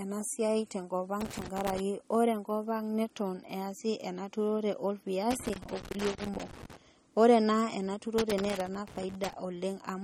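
The whole clip has that watery, swirly edge, with smeared consonants and nothing above 17.8 kHz, which is likely MP3 compression at a starved bitrate, something down around 36 kbps. Weak frequency lines keep dropping in and out between frames, so the damage is plainly audible.

Then there's loose connector crackle: 1.21 to 1.80 s, just before "ore enkopang neton"; 5.31 to 6.77 s, right after "ena turore"; and 8.18 to 9.33 s. Each is an irregular scratchy burst, a contact making and breaking and chopping the signal.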